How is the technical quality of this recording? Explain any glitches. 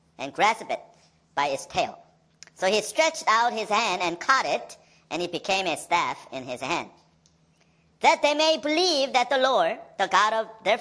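The whole clip runs fast and high: a wrong sample rate, with audio played about 1.38 times too fast, raising pitch by about 5.55 semitones, which fits 16 kHz material played at 22 kHz.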